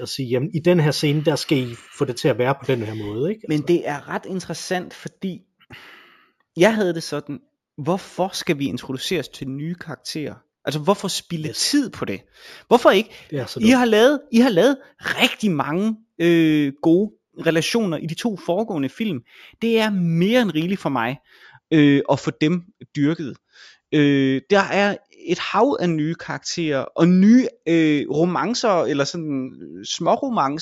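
Imaging from linear upsampling runs from 0.0 to 21.43 s, ending before "øh at få dem": straight-line interpolation, consistent with 16 kHz raised to 48 kHz, dulls the top and leaves mirrored images at 8 to 16 kHz, roughly 25 dB down, adding metallic shimmer to sibilants.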